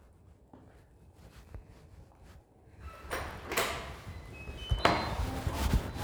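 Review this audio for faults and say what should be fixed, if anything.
No faults heard; nothing needs fixing.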